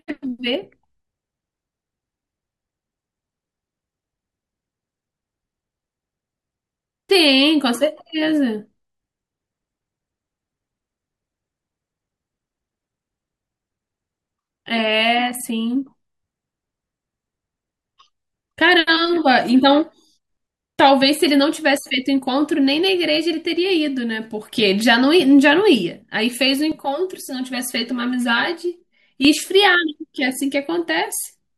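From 26.72 to 29.25 s the speech turns hollow and phasey, the sign of channel delay (comb filtering). One channel arrives around 5 ms late, and when both are summed to mono the shared sound cancels at evenly spaced frequencies, the first notch near 100 Hz with more repeating up the spectrum. Unlike flanging or phasing, these notches stay fixed rather than sweeping, and unlike simple low-pass dulling, the loss is a regular series of dips.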